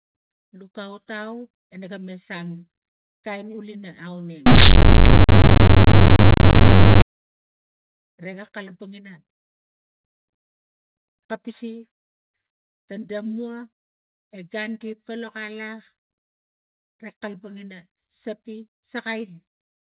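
From about 4.46 to 7.02 s, right after "kain ulina", you get companded audio read as linear: mu-law bytes are played as plain 8-bit samples without expansion. Quiet and loud parts come out equally huge, so it turns into loud, buzzy distortion with heavy noise in the gaps.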